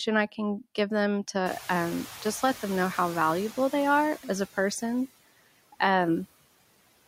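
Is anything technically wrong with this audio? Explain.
Yes, there are two noise-suppression faults in this speech clip.

Noise suppressor artifacts run throughout. The suppressor cuts the bands it judges to be steady noise by about 16 dB, frame by frame, so the background sinks in gaps and returns under speech.

Noise suppressor catching up occurs from 1.46 to 3.51 s. The room noise jumps by about 23 dB around 1.5 s, and the suppressor's noise estimate lags. At first it cuts only about 6 dB, so the noise comes through with less reduction, then it sinks as the estimate adapts over 2.05 s.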